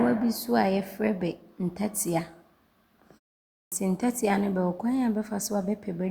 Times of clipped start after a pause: 3.58-3.72

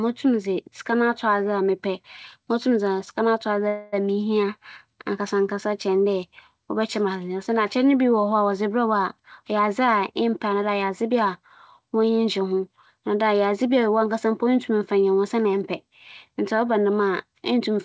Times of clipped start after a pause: none

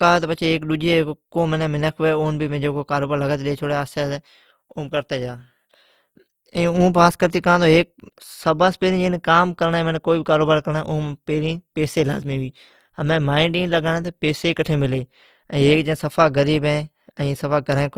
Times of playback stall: none

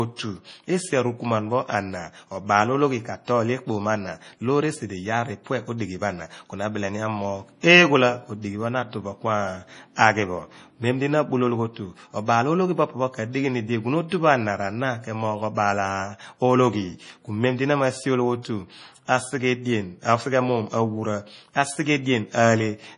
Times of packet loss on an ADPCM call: none

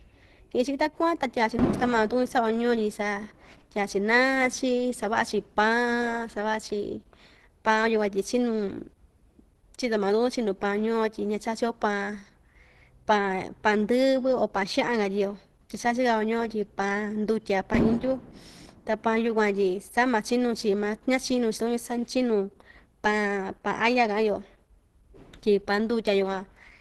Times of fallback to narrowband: none

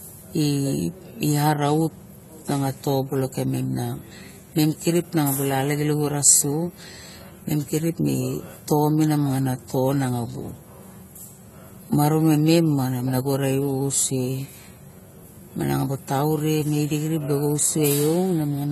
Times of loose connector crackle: none

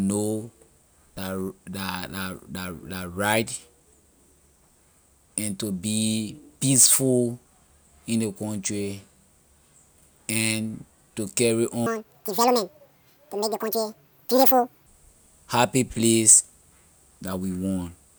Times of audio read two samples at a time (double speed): 11.86-14.86

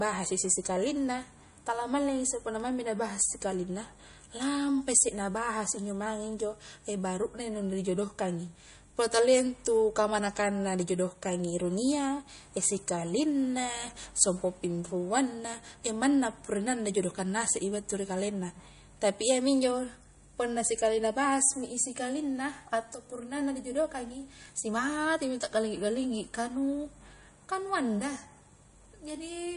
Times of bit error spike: 2.60, 24.45

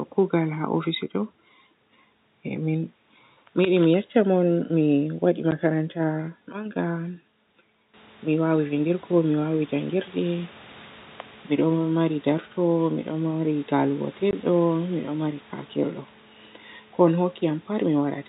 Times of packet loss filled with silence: 5.51, 14.31

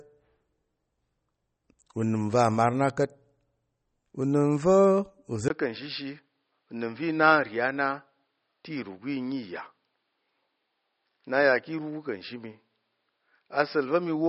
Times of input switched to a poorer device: 5.48-14.28

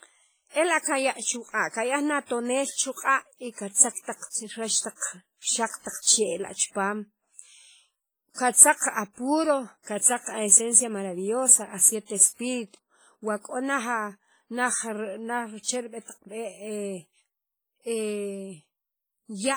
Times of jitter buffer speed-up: none

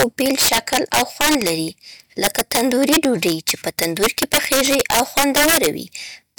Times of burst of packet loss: none

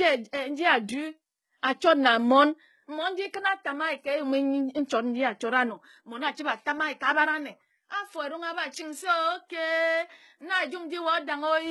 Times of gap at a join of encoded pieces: none

